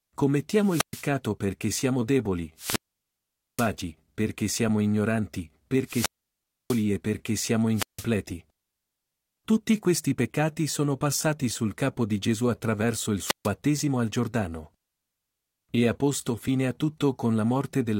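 The speech drops out five times with wireless microphone squelch dropouts: 0.61–1.1 s, 2.56–3.73 s, 5.84–6.86 s, 7.73–8.07 s and 13.23–13.5 s. Each time the FM link fades, hiss swells briefly, then the receiver's squelch shuts the output, leaving near silence for about 0.12, 0.83, 0.64, 0.16 and 0.14 s respectively, before the voice comes back. The holes around 3 s and 6 s are the longest.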